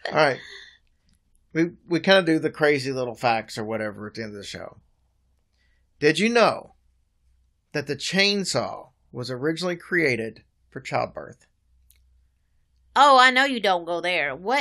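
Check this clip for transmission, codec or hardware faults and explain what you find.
No faults turn up when this clip is checked.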